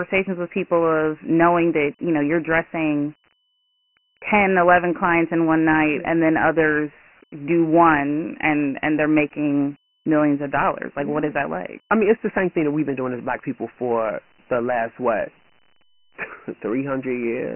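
From start to finish the speech carries Dialogic VOX ADPCM damage. Nothing survives above 3 kHz, and the low end thins out below about 150 Hz. That cutoff points to the 6,000-samples-a-second variant, which fits roughly 24 kbps of 4-bit (OKI) ADPCM. The coarse step adaptation leaves heavy gritty hiss clinging to every syllable. That rough, signal-following noise is what sets it apart from a plain telephone band-limit, where the band narrows but the sound stays clean.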